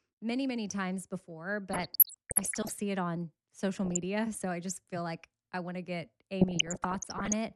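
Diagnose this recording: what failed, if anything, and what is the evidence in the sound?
MP2 compression, throughout, at the codec stage: the speech is dull and granular, with upper bands flickering in and out and a gurgling edge. This likely comes from MPEG Layer II at a rate near 80 kbps, too few bits to keep every sub-band alive.

DAB burbling, at 1.72 to 2.70 s (after "many many times before"), 3.73 to 3.97 s (after "see it on") and 6.41 to 7.34 s (after "I want to get"): short blips of noise in single sub-bands. Reception errors got past the error correction into the MP2 frames, corrupting samples in single sub-bands.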